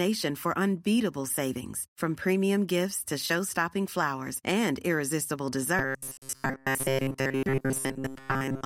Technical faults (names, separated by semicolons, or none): robotic sound from repeated short buffers